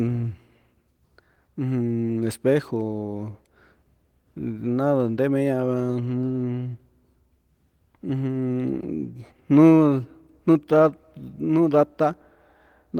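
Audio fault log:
Nothing stood out on listening to this speech clip.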